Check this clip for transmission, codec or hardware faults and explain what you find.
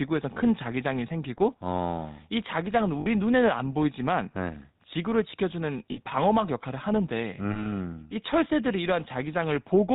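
Two faults are audible in this speech: a GSM full-rate codec coloring the whole clip, and four short dropouts from lost GSM frames.

Throughout, the voice sounds buzzy and gravelly, with nothing above 4 kHz. The cause is the GSM full-rate codec, which fits a 13 kbps stream. It rebuilds speech from a vocal-tract model driven by sparse, evenly spaced pulses, which produces that rough texture.

At 0.34, 3.0, 5.92 and 7.52 s, the sound briefly freezes into a harsh, metallic ring. These are lost GSM frames. The decoder repeats the last good frame's settings. The gaps run from about 20 to 60 ms, with the longest at 3.0 s.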